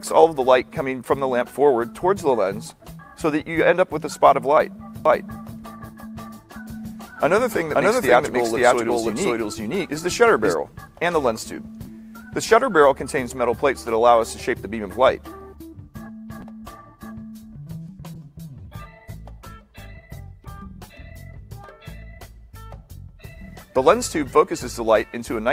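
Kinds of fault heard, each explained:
Doubled audio track: From 5.05 to 10.53 s, a second full-band copy of the sound runs about half a second behind the original at about the same level, likely because the audio was picked up again through a slower path or an edit left two out-of-step copies in place. The copy has no decay or room colouring, so it reads as a clean echo, and it appears and disappears abruptly at those two points.
Call bitrate drop: From 18.15 to 21.83 s, the sound turns rough, watery or muffled because the call's bandwidth estimate fell and the encoder was told to spend far fewer bits, going from 48 to 17 kbps. At that rate Opus codes each frame more coarsely and trims the high frequencies. The bitrate holds at its lowest for about 2.1 s and recovers before the clip ends.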